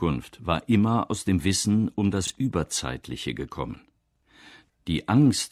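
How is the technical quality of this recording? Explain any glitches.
The recording has two glitches. Both are chunks out of order. At 2.25 to 2.30 s and 4.16 to 4.23 s, a 23.22 ms chunk plays one, then two, chunks late. That leaves three hard joins and a brief jumbled moment.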